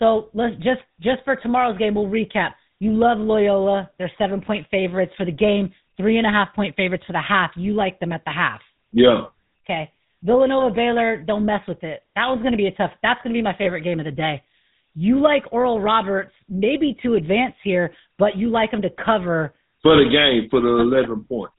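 Throughout, the speech has passed through the GSM full-rate codec, whose coarse, plainly audible coding fits a 13 kbps stream. It rebuilds the voice from a vocal-tract model driven by a thinned, regularly pulsed excitation, and it cuts everything above 4 kHz, so the voice sounds buzzy, gravelly and band-limited.

From 13.64 to 13.68 s, between "going to be my" and "game of the day", there are lost GSM frames. The decoder filled the gap by repeating the last good frame, which leaves a brief, rough metallic ring.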